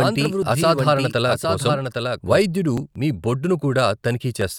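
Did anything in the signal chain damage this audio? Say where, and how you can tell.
Yes. A doubled audio track runs from the start to 2.42 s: a full-band copy about 5 dB quieter trails roughly 0.7 s behind, with no decay or room colour, then stops abruptly. Likely an editing or storage stage holding two offset copies. On a spectrogram, each speech pattern reappears shifted right.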